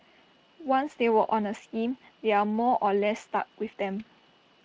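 Nothing in this speech recording stood out as a technical fault on listening.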